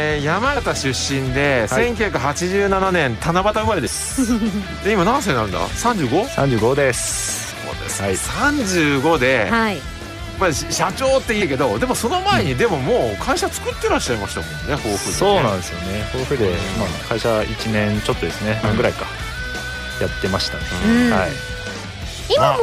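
Short bursts of damaged data in the compressed stream occur at 0.56 s, from 3.86 to 3.88 s, and at 7.50, 11.40 and 18.62 s. Each lasts under about 20 ms. At each point the bytes the decoder received were wrong, so it misread the affected frames, lost sync and had to find the next valid frame header before normal decoding resumed. Each event is heard as a brief chirp or blip that breaks into the sound.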